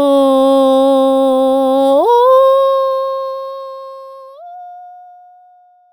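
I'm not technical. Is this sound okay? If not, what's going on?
Yes, nothing is wrong here.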